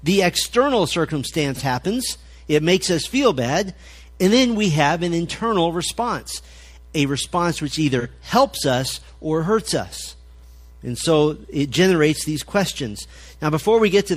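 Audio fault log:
1.54 to 1.61 s and 7.99 to 8.06 s, AAC frame loss with concealment. Each is a brief smeared, noisy patch. About 43 ms went missing, which fits one lost frame. The decoder rebuilt it from the previous spectrum, so detail blurs before clean sound returns.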